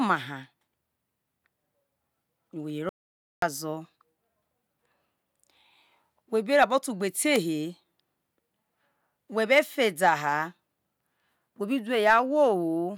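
At 2.89 s the speech drops out to silence and only comes back at 3.42 s, so about half a second is simply gone. The gap is dead silence with no room tone, likely a brief input loss or accidental mute while recording continued.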